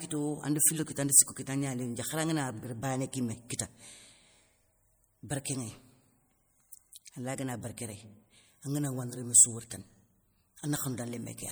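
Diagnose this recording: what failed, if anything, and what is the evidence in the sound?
The trouble sits at the codec stage and runs the whole way through the speech: a watery, swirly quality with chirpy, metallic edges on the s sounds and softened consonant attacks. That's the signature of MP3 compression, likely at a bitrate around 64 kbps. The encoder splits the sound into frequency lines and drops the weak ones when it runs short of bits, so those lines flicker on and off from frame to frame, giving that plainly audible burbling.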